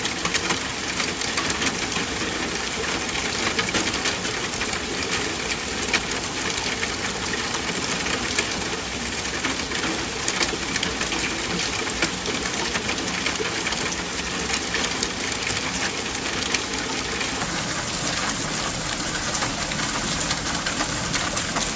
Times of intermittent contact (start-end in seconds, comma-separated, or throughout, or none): none